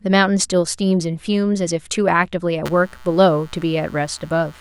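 From 2.65 s to the end of the speech, computer activity noise appears: a buzzy, chirping texture pulsing at around 150 times a second, sitting some 25 dB below the speech. Processor, graphics or mouse load is shifting the ground that the audio circuit shares, so the noise follows the machine's workload rather than the speech. Unlike mains hum, it is not a constant tone locked to the power frequency. It starts mid-clip and has a gritty, pulsed character.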